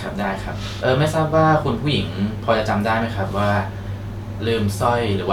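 Nothing stood out as a technical fault on listening to this speech recording.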